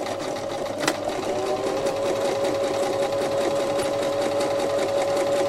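At 1.24 to 1.29 s and again at 3.80 to 3.85 s there's damaged data in the compressed stream: corrupt bytes make the decoder misread those frames and lose sync while it hunts for the next header, leaving a short glitch about 40 ms long each time.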